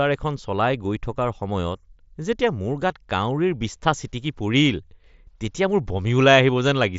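Nothing stood out on listening to this speech clip.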